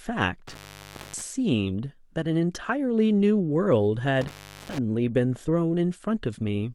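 Intermittent contact at 0.47–1.22 s and again at 4.21–4.79 s: a loose cable or plug briefly opens the signal path, so the speech drops out for about 0.58 s and 0.39 s, with crackle at each edge and faint hiss during the gaps.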